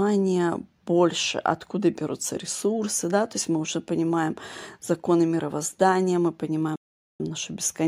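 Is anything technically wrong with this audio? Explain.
Yes. At 6.76 s, right after "понимаем законы мировоздания мы", the speech drops into dead silence for about 0.44 s, then picks up again at 7.20 s exactly where it broke off, with nothing skipped or repeated. That pattern is a rebuffering stall: playback consumed all the downloaded audio and had to wait for more data before continuing, so the clip loses no content but gains 440 ms of added time.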